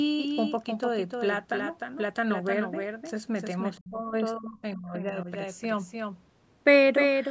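Throughout the clip the speech carries a doubled audio track, likely from a second, slower capture path or an edit that leaves two copies out of step. A full-band copy trails the original by roughly a third of a second at about 5 dB lower. It sounds like a dry slapback: every syllable repeats with no decay or room colour. The call microphone processing, which passes nothing above 8 kHz, sounds as expected.

From 3.77 to 4.15 s and again from 4.36 to 5.29 s, the speech is suppressed in double talk, likely because the echo canceller could not separate the local talker from loudspeaker echo while both sides spoke, and turned everything down. In the first stretch the speech sinks by as much as about 30 dB. In the second it drops by up to about 25 dB.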